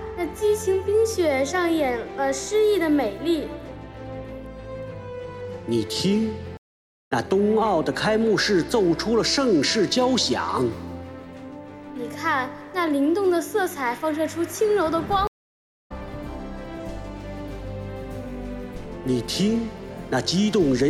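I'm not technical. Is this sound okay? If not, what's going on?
No. There are two stream reconnects, at 6.57–7.12 s and 15.27–15.92 s: the connection dropped, leaving about half a second of silence, then resumed further along, skipping roughly 0.3 s and 0.7 s. Unlike a brief dropout, the sound also jumps ahead rather than just going quiet.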